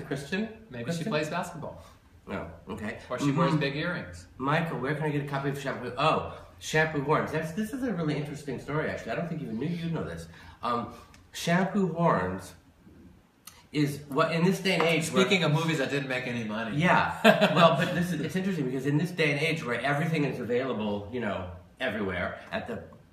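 No faults are audible anywhere in the clip.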